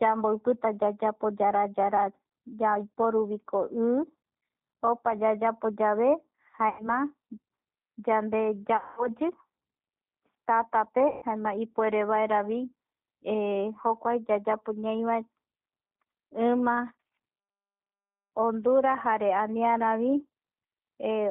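Throughout, the speech sounds rough and slightly synthetic, with nothing above 4 kHz. This is the G.729 codec, and its damage at what sounds like 8 kbit/s is plainly audible: it rebuilds speech from a vocal tract model and sparse pulses.

At 6.69–6.89 s, 8.77–9.08 s and 11.08–11.25 s, the sound smears into a fading buzzy tone or coloured noise, then recovers weakly. This is VoIP packet loss concealed by the speech codec. About 100, 200 and 140 ms went missing, and the decoder filled each gap by extrapolating from its last pitch and filter.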